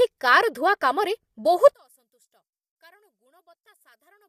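From the start, the speech has a rough, grainy texture with noise filling the gaps between harmonics and a thin, synthetic-sounding top band. This is low-delay AAC compression, likely AAC-ELD, whose short frames resolve pitch poorly and fit a bitrate around 32 kbps.

At 1.74 s the level drops by about 37 dB and stays down to the end, leaving only a faint residue. One channel inverted is the likely cause: with reversed polarity, the centred speech cancels when the stereo pair is summed to mono.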